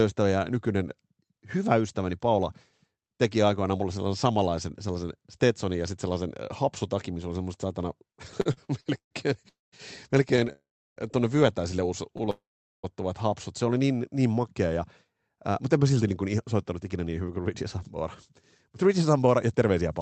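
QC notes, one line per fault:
8.41–9.13 s, 10.36–10.50 s, 12.14–12.28 s (just after "tuonne vyötäisille"): repeated stalls (stutter). Packets arrived late and the jitter buffer kept running dry, so the last sound was stretched over 5, 3 and 4 gaps (294, 41 and 39 ms filled, longest 132 ms). Nothing is lost, but the audio drags. On a spectrogram, short frozen harmonic smears interrupt the onsets. The waveform shows repeated near-identical cycles.
9.49–9.74 s, 10.52–10.98 s, 12.30–12.85 s (the last just after "tuonne vyötäisille"): call audio freeze. The sound holds, then drops out for 235, 440 and 531 ms, of which 180, 340 and 430 ms are silent. This is likely a packet delay that emptied the jitter buffer. Speech then resumes where it stopped, now later. A spectrogram shows a decaying held band, then a blank column.
14.84–20.01 s (from "niin niin makea ja"): jitter buffer speed-up. Short pitch-period slices were cut repeatedly to shed around 0.4 s of buffered delay. 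Speech runs at 108% speed with unchanged pitch and sounds hurried. Harmonic spacing stays constant while syllables compress, and the waveform shows tiny splices.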